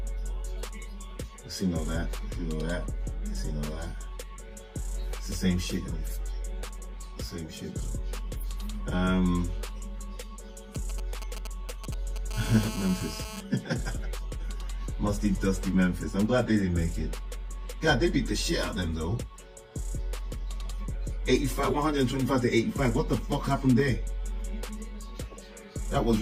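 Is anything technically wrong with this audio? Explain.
Yes, there's interference from a 2G phone sitting close to the recording gear.

From 10.75 to 12.33 s you get GSM signalling bursts. The phone is only sending short clusters of radio bursts, the kind it fires off while setting up a call or message. The audio circuitry rectifies those pulses into sound, so you hear a galloping dit-dit-dit of short buzzes at a 217 Hz repeat rate, sitting roughly 10 dB under the audio.

Right after, from 12.34 to 13.41 s, it turns into a steady GSM phone buzz. By then the phone has moved into a call and is transmitting continuously at 217 bursts per second. Once rectified, that becomes a hard, raspy 217 Hz buzz full of harmonics that has nothing to do with the audio itself. It sits about 11 dB below the signal.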